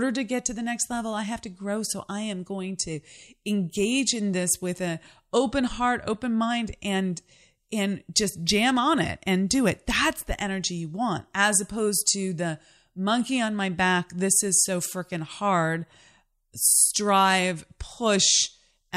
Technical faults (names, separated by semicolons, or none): none